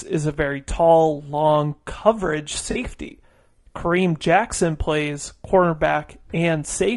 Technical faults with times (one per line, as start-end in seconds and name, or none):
0.00-6.96 low-delay AAC compression
2.71-2.77 AAC frame loss with concealment